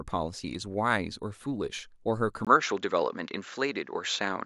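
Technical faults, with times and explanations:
2.45 s to the end: input switched to a poorer device, likely. At 2.45 s the speech drops out for a 20 ms gap, then returns a few decibels different in level, duller, with no content above 7.6 kHz and a faint new background noise well below the speech. On a spectrogram, the upper band goes abruptly empty from 2.45 s onward and a thin noise floor appears between phrases. The waveform shows a brief flat gap at the switch and a changed envelope afterwards.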